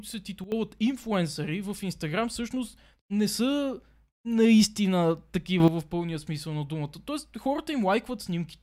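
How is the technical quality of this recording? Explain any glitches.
The recording has two sudden gain jumps. From 0.44 to 0.52 s, level drops about 12 dB. From 5.6 to 5.68 s, it rises about 10 dB. Speech and background shift together, likely from gain applied without a ramp.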